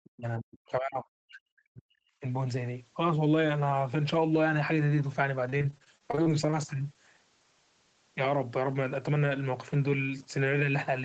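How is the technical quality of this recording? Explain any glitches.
Two glitches stand out, over a call path that tops out around 8 kHz, which fits Opus at a fairly low bitrate.

From 0.01 to 2.24 s, the speech sinks as much as about 40 dB. That's likely speech suppressed in double talk, with the echo canceller ducking the near talker.

From 5.49 to 6.56 s, there's repeated packet loss with a robotic sound: frequent short holes, none longer than 31 ms, patched by stretching the previous audio. About a quarter of that stretch is concealed, so it sounds choppy.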